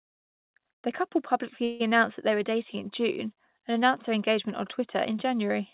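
At 1.64 s, after "couple publicly", a call audio freeze, likely from delayed packets emptying the jitter buffer, stretches the last sound into a fading buzz for about 0.18 s. Then "announced that they were" resumes intact, 157 ms late. A spectrogram shows a smeared, decaying band, and the waveform shows a tapering, repetitive stretch.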